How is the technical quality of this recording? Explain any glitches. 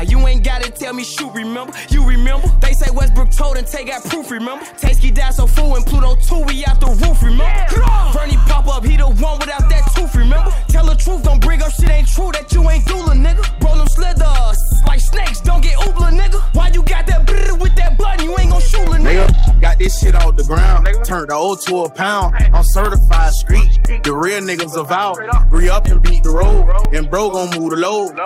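The quality suffers from two clear problems: constant hard clipping and a regular tick from periodic dropouts.

Hard clipping runs through the whole clip. The signal is pushed about 6 dB past what the stage can pass, so around 3% of samples get their peaks sliced flat. Those flat tops add high harmonics, giving a crackly, harsh edge on the loud moments.

Periodic USB or driver dropouts start at 0.87 s and recur every 1.0 s through 27.85 s, about 30 in all. Each time, something stalls the bus or driver and roughly 2 ms of audio is replaced by silence, heard as a steady once-a-second tick.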